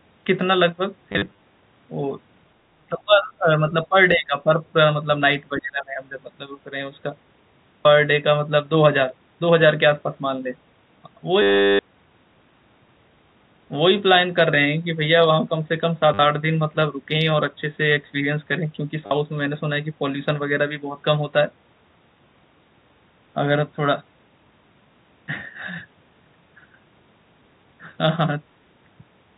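From 1.12 to 1.38 s there's packet loss with the last packet repeated: about 140 ms dropped in scattered bits across that stretch, the longest gap 40 ms. The receiver just replays the previous chunk, and you get a brief robotic stutter. The sizes fit 10 ms packets, so longer runs buzz at around 100 Hz.

Next, between 2.69 and 3.96 s the talker keeps getting pushed down, by about 30 dB at the worst point and across roughly a second in total. It drops again from 4.15 to 4.75 s, by about 20 dB, and from 5.57 to 6.0 s, by about 25 dB. The level dips and parts chop out, which is likely speech suppressed in double talk: the echo canceller hears both sides at once, can't tell the talker from the far end's echo, and clamps down.

The packet loss comes back harder from 11.42 to 11.79 s, a solid 370 ms gap. That's long enough for the replayed packet to settle into a sustained buzzy drone. Then two short 50 ms hits land at 16.14 and 19.06 s, each a quick stuttery blip. 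All of this sits on top of a narrow telephone-band signal, consistent with G.711 A-law at 64 kbps.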